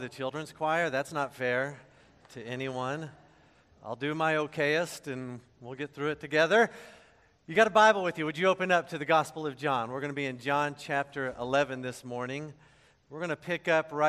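At 7.55 s there's a block of digital silence, about 2.2 ms where the sound cuts out, so the abrupt edges come across as a single tick.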